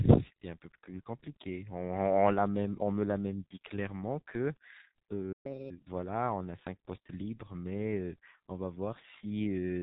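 G.723.1 codec damage runs through the whole clip. The speech is band-limited with nothing above 4 kHz, so it sounds muffled. Heavy low-rate coding, consistent with a 6.3 kbit/s mode, leaves a hoarse, rasping quality and smears the consonants together.

A playback stall hits at 5.32 s. The speech cuts out mid-flow and stays silent until 5.46 s. The likely cause is the player running short of data or having its output thread blocked, so nothing reached the output until it recovered.

Catch-up at higher speed follows from 5.46 to 5.70 s. The player works through its backlog at 1.5 times normal speed, which raises the pitch by roughly seven semitones. The result is a brief chipmunk-like rush before the speech settles back to normal pace.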